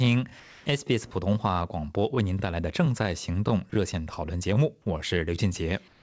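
From 0.40 to 0.66 s, and again from 5.88 s to the end at 6.02 s, the quiet background turns into a smooth, featureless hiss, about 2 dB and then about 4 dB quieter than the real background, which sits about 26 and 33 dB below the loud parts. This is comfort noise in place of the background, likely from discontinuous transmission: the sender paused sending and the receiver filled the gap with synthetic noise, here heard through a band that stops at 8 kHz.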